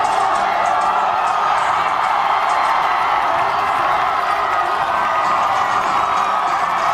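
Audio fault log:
No audible faults detected.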